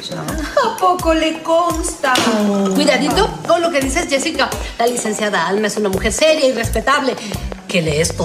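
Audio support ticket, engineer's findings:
Train of clicks, 1.70 s to 8.11 s. Regular ticking at 5.15 clicks per second, around thirty in all, near-identical shape, audible over the sound and through the gaps. Peaks sit roughly 10 dB above the programme level. Likely cause: interference pickup from nearby equipment or an interface fault injecting a repeating pulse. The steady spacing points to a periodic source rather than random damage. Check grounding, cabling and nearby gear.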